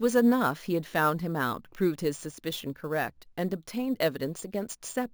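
Imaging from sample-and-hold upsampling, fitting a 16 kHz source, puts metallic fizz at 8 to 16 kHz throughout, about 20 dB down. Unlike hiss, it tracks the speech.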